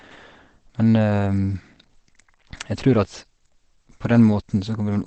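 Throughout, the speech sounds muffled and hoarse, likely from heavy Opus compression at around 12 kbps. A spectrogram shows an empty band above 8.5 kHz.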